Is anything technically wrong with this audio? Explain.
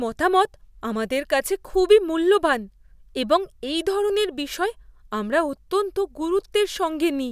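No, nothing technically wrong stood out on listening to this speech recording.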